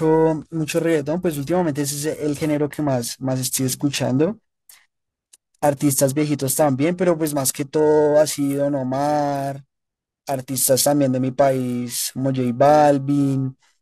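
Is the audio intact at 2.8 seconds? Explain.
No. Periodic clock jitter runs through the whole clip, including 2.8 s: interference is wobbling the converter's sampling clock at around 1 kHz, so every component of the speech gains sidebands spaced that far above and below it, strongest on high frequencies, giving a rough, metallic edge that vanishes in pauses.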